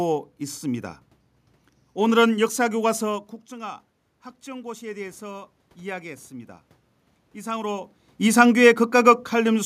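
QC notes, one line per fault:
4.44–6.59 s, automatic gain rising: input fell by about 15 dB, so the gain control crept up about 4 dB, swelling voice and room noise together.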